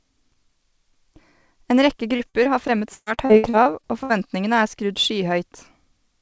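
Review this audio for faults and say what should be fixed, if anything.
Choppy, robotic speech from 2.16 to 4.11 s, just before "er skrudd". This is repeated packet loss: about a dozen holes, the longest 120 ms, with roughly a quarter of the stretch patched by stretching earlier sound. The call path's bandwidth stops at 8 kHz, which fits G.722 at 64 kbps. To prevent this, fix the network path or add forward error correction and a deeper jitter buffer.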